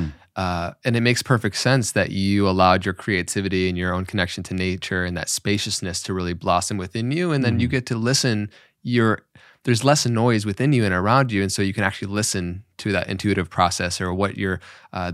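No technical faults are audible.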